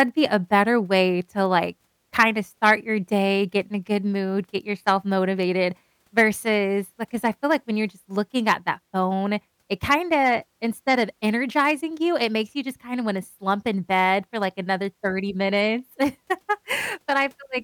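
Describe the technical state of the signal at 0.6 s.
At 0.6 s the signal is intact, with no audible fault in the speech at that moment.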